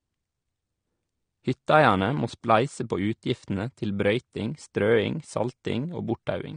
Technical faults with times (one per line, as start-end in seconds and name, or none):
0.00-6.56 AAC compression